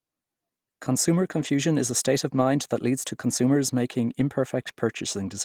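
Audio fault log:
1.39–1.49 s and 2.33–2.43 s, lost packet rebuilt from error correction: each time three separate packets went missing, about 60 ms of speech, which fits roughly three 20 ms frames. The decoder filled it from the low-bitrate backup copy carried in the following packet, so nothing drops out. The patched stretches, just before "is a state of" and then right after it, ahead of "that leads to consumers", sound briefly coarser and noisier because that copy holds far less detail.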